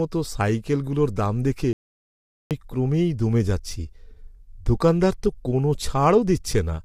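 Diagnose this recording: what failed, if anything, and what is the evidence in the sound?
At the codec stage, likely low-delay AAC compression (AAC-ELD) at a rate fitting about 32 kbps. Its short frames resolve harmonics poorly, so the speech sounds plainly rough and grainy throughout.

At the input or link stage, the signal was likely lost while the recorder kept writing silence. This caused an audio dropout to silence from 1.73 to 2.51 s, a 0.78 s gap with no room tone.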